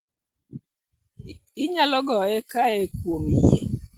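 From 2.35 to 3.15 s the speech shows scattered short gaps: roughly seven tiny dropouts, each under about 15 ms, patched by extending the preceding sound, leaving brief ticks and smears.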